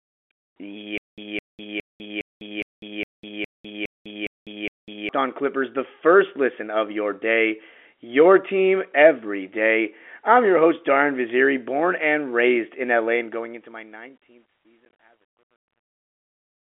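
Stutter with silent gaps runs from 0.98 s to 5.09 s. A fragment of about 210 ms plays, then about 201 ms of digital silence follows, repeating ten times on an even 411 ms cycle. This likely comes from the stream stalling and replaying its last buffer at each retry, so the intended audio is lost.

Packet loss filled with silence occurs at 14.85 s. About 40 ms of sound is dropped across an 80 ms span, in holes no longer than 20 ms, which fits 10 ms packets. Silence replaces each hole, leaving hard-edged gaps.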